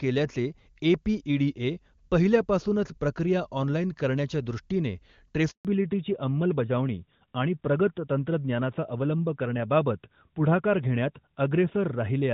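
A handover gap opens at 5.51 s and lasts until 5.65 s, about 140 ms. As the call was passed from one network link to another, no speech frames got through during the switch, so the sound fades out within a few tens of milliseconds and leaves a short, hard silence. Whatever was said in that window is simply missing, and the speech picks up again abruptly once the new link carries audio.

A fallback to narrowband follows immediately at 5.65 s and continues to the end. Before the gap, the call runs on the AMR wideband (HD Voice) codec, with a full, clear upper range that fits a high rate such as 23.85 kbit/s. After the switch, the new link is carried by a narrowband codec, which the sound suggests is AMR-NB at 12.2 kbit/s, and nothing remains above 4 kHz. The speech loses its crisp sibilants and air, turning duller, boxier and rougher than the first half.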